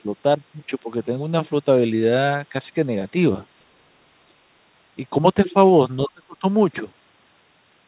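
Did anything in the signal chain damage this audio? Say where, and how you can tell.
Yes, in the call processing stage. The speech dips twice: briefly, by about 15 dB, from 4.27 to 4.33 s, then much harder, by about 30 dB, from 6.06 to 6.44 s. The dips have no matching codec or network artefacts. This is likely speech suppressed in double talk, where the echo canceller could not separate this talker from far-end echo while both spoke, and attenuated everything. The band-limiting to 4 kHz comes from the narrowband call path.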